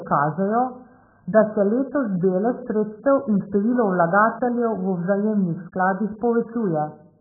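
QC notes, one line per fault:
Throughout, AAC compression: the whole clip sounds dull and muffled, with nothing at all above about 1.8 kHz, so the speech loses its consonant edges and any air on top. What's left has a smeared, watery feel. That hard ceiling and heavy damage likely come from AAC-LC running at a very low bitrate, something around 8 kbps. At that rate the encoder gives up the upper band entirely and quantises what remains very coarsely.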